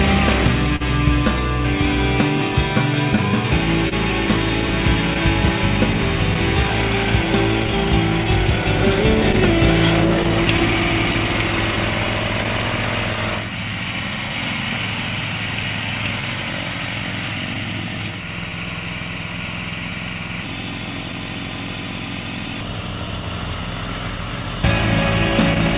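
The audio carries clock drift between sender and receiver throughout: the sending clock runs roughly 1.5 percent slow, so the receiver's jitter buffer keeps draining and must be refilled, producing small timing hiccups at uneven intervals across the whole clip. Separately, there is a short stall from a late packet at 0.76 to 0.82 s. The buffer ran empty and the receiver held the last sound for 41 ms until the packet arrived, adding that much delay and leaving a stretched moment with a slight buzz or dip and nothing actually lost. Between 3.16 and 10.6 s come scattered short gaps, about seven in all. Each hole, the longest around 30 ms, was patched by extending the preceding sound, heard as brief ticks or smears over roughly a hundredth of that stretch. From 4.42 to 24.19 s the receiver makes repeated timing corrections, repeating short pieces so playback runs at 99 percent speed. These edits add about 200 ms in total and come across, if at all, as faint hiccups and a slightly unsteady tempo. 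All of this sits on a call path using G.711 mu-law, which fits a 64 kbps stream, and nothing is present above 4 kHz.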